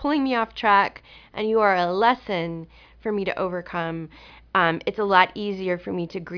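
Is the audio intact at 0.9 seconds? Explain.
Yes, the speech at 0.9 seconds is intact, with no dropout, click, distortion or other fault at that moment.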